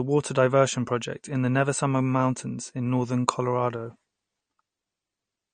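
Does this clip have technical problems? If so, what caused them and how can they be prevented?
Yes. Throughout the speech there is a watery, swirly texture, with s sounds turning metallic and chirpy and consonant attacks smeared, and nothing survives above 9 kHz. That points to likely MP3 compression at a low bitrate, roughly in the range of 38 kbps. Starved of bits, the encoder cut the treble at a fixed point and zeroed weak frequency lines that flicker on and off between frames. Encoding at a higher bitrate, or using a lossless format, would prevent it.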